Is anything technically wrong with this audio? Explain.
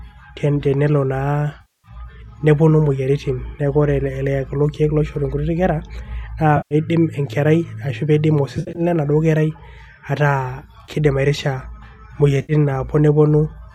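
Yes. Speech drops into brief AAC frame loss with concealment at 1.61–1.88 s, 6.57–6.75 s, 8.57–8.81 s (scattered short gaps, the longest about 70 ms), 10.85–10.90 s and 12.42–12.53 s. The decoder refills missing frames from the last good spectrum, so each gap becomes a smeared, noisy or phasey patch rather than the clean silence or click of a plain dropout. The faint grain beneath it all likely comes from low-delay AAC coding.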